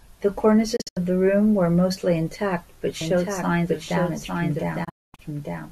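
At 0.76 to 0.97 s a digital broadcast dropout mutes the speech in short holes totalling 144 ms, each with an 8 ms fade, which fits lost frames of about 24 ms. The waveform and spectrogram show blank vertical gaps.

From 3.01 s to the end, a doubled audio track enters abruptly: a full-band copy about 5 dB quieter trails by roughly a second, likely from a second, slower capture path. It shows as a quieter, dry repeat of the spectrogram pattern.

A second dropout at 4.84 to 5.19 s loses 288 ms in holes, the longest 240 ms, leaving a wider flat gap.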